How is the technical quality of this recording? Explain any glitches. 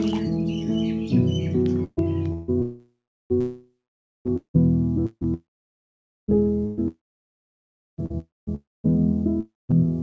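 The recording is badly damaged by network problems from about 1.8 s to the end. Through the call link, which passes nothing above 8 kHz (consistent with a G.722 codec at 64 kbps), the audio is repeatedly broken up and cut out.

Repeated packet loss (robotic sound) runs from 1.84 s to 9.87 s. Ten separate stretches of packets failed to arrive in time, the longest lasting 174 ms and about 0.8 s missing in total. The receiver covers each gap by extending the last stretch of sound it had, and the next gap arrives soon after. The result is choppy audio with pieces dropped throughout.

Long network dropouts occur at 2.62–3.32 s, 3.40–4.27 s, 5.34–6.30 s, 6.88–8.00 s, 8.19–8.49 s, 8.55–8.86 s and 9.40–9.71 s. Each one sounds like a brief smeared continuation of the previous sound that dies away into silence or low steady noise. The silent part lasts between about 0.2 s and 1 s, the longest at 6.88 s. 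The likely cause is that no audio reached the receiver for these stretches, so that material is simply gone when the sound resumes.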